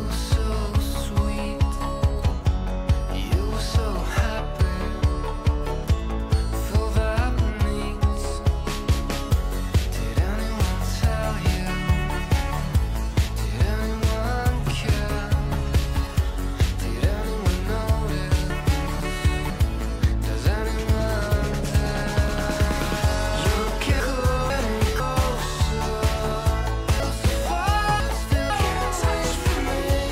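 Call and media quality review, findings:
Chunks out of order, 18.5–19.5 s: one 500 ms block delivered a block late, played after its successor. Probable jitter-buffer or write-queue sequencing fault. Jumbled passage, three hard joins.

24.0–25.0 s: same fault, 500 ms block one position late. Garbled swap, three hard joins.

27.0–28.5 s: 500 ms block two positions late, displaced across 1.5 s. Longer scrambled stretch, three hard joins.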